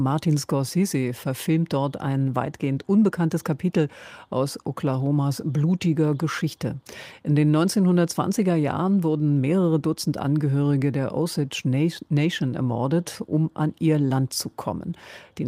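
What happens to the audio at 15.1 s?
At 15.1 s the speech carries on intact, with no dropout, click or other fault at that moment.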